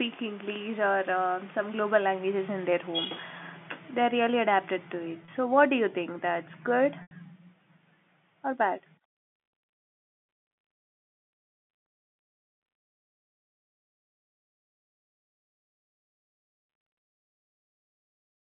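At 5.25 s there's a 30 ms gap the receiver papers over by repeating the last pitch period, so it comes across as a brief buzzy hold. That's packet loss with pitch repetition. At 7.02 s a longer 90 ms loss, which fits about three packets going missing, lets the repeated cycle fade toward silence before the speech cross-fades back in, all within the telephone band.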